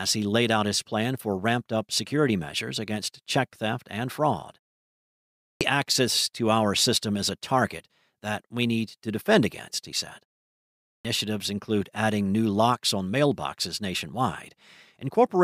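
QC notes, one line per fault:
5.45 s and 10.9 s, clipped start after a pause: each time the speech resumes, it bursts in abruptly from silence with its opening sounds missing, just before "access to our system" and "include adding new locks". About 158 ms and 148 ms are lost, following pauses of 0.94 s and 0.73 s. The output device drops into a sleep state during the gap and takes that long to wake and lock again, so the onset is swallowed.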